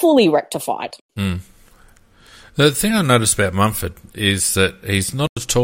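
Abrupt silent gaps cut the speech at 0.88–0.95 s and 5.26–5.43 s. This is a corrupt frame muted fault: the decoder rejected damaged compressed frames and silence filled them.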